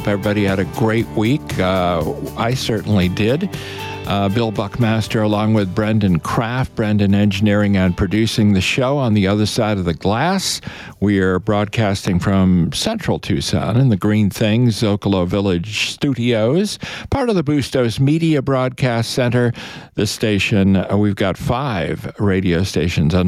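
Gain pumping runs throughout: the level swings by around 10 dB, likely from input gain set far too high with a fast limiter clamping every peak. A loud pop at 12.08 to 12.10 s lands as one sharp thump, roughly 5 dB above the surrounding audio, likely from a voltage spike such as a plug, switch or static discharge.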